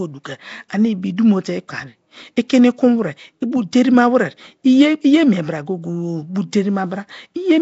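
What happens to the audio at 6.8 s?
Nellymoser compression is audible at 6.8 s, as it is across the whole recording rather than as an isolated event. The coder likely handled short blocks with a fixed, very small bit budget, leaving weaker bands with no bits at all and refilling them with noise. The speech there carries a rough, hissy halo and a smeared, underwater character, with nothing above about 7.7 kHz, consistent with roughly 32 kbps Nellymoser Asao.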